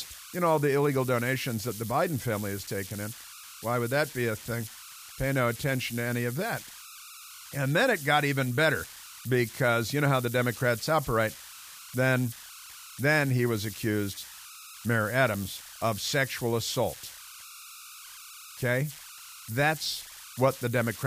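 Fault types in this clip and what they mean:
Converter idle tones: throughout the speech, a whistle around 1.5 kHz sits about 17 dB below the signal. An undithered delta-sigma converter settles into repeating bit patterns at low input levels, producing this tone in pauses and grainy noise beneath quiet passages.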